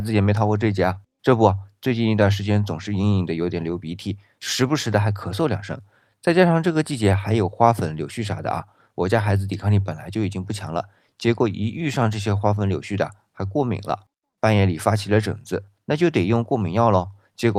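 Clock drift between sender and receiver runs throughout: the sender's clock is roughly 3% slow, so the buffer keeps draining, unlike random network jitter, which has no fixed direction. Repeated timing corrections follow from 0.02 to 17.48 s, stretching the speech to 97% speed and adding about half a second. These are heard as small, unevenly spaced hiccups and a slightly dragging tempo rather than the abrupt silent gaps of packet loss.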